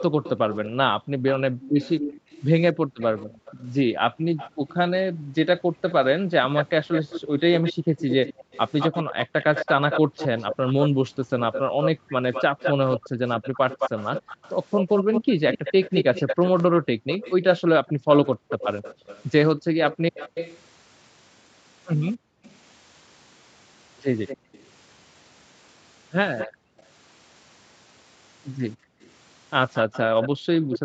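Echo leak runs through the whole clip, from 0.0 s onward: a copy of the speech returns 226 ms late, about 10 dB below it, likely because a loudspeaker's echo canceller let it through. Background gated by the echo canceller appears from 0.1 to 13.2 s, about three seconds of dips in all, and again from 16.68 s to the end. The room sound falls by up to about 40 dB while the far side plays, then returns when the canceller releases.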